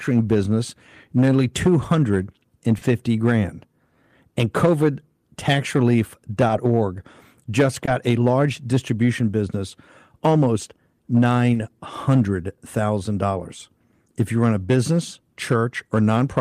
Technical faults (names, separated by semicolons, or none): short concealed packet loss